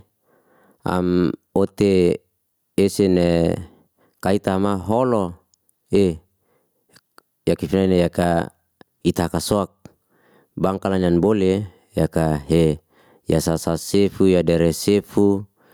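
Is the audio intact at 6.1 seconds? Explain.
No, at 6.1 seconds, as throughout the clip, the gain is pulled down by roughly 10 dB under each loud sound, bringing loud and soft parts closer in level and squashing the sound: gain pumping, likely from excessive gain driving a fast limiter.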